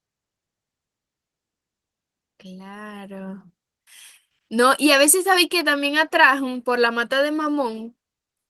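No technical faults are audible.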